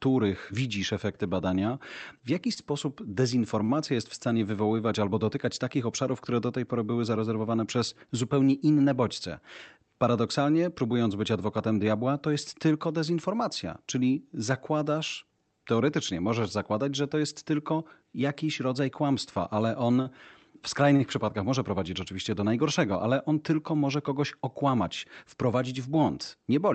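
Speech carried over a call link, with content cut off above 8 kHz as the codec band limit, and a coding texture consistent with Opus at around 40 kbps. Four short stalls from a late packet occur at 2.53–2.59, 3.64–3.72, 20.02–20.09 and 20.96–21.03 s. Each time the jitter buffer ran dry, and the receiver held the last sound for 29, 46, 38 and 36 ms until the packet arrived. Nothing is lost, but on a spectrogram each stall shows as a brief flat smear of repeated harmonics, and the waveform has a small dip or buzzy stretch there. A jitter buffer speed-up runs from 17.72 to 18.15 s. The receiver trimmed pitch-period pieces, about 40 ms in total, to shed excess delay, so the speech plays about 7% faster at unchanged pitch. The waveform shows whole cycles removed with no gaps, and the spectrogram's harmonics stay level while syllables come closer together.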